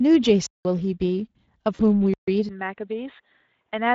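Throughout, the speech carries Speex codec damage: a hoarse, noisy buzz in the voiced sounds, with the band above 8 kHz reduced to a hissy fill. This points to a rate near 20 kbps. Unlike generic lossy-codec smearing, the excitation itself sounds starved and rough.

At 0.46 s the sound drops to a block of digital silence lasting about 186 ms, ending at 0.65 s, which fits an 8192-sample buffer left unfilled. A second block runs from 2.14 to 2.28 s, about 139 ms. Each cuts out and back with no fade, with silence between.

At 2.49 s the tone turns duller and boxier for the rest of the clip. Nothing remains above 3.8 kHz, the level falls by about 5 dB, and a faint new noise floor appears roughly 50 dB down. There is no gap at the change, which likely comes from the input switching to a poorer device. The sudden, lasting shift in bandwidth, level and noise sets it apart from the codec's steady roughness.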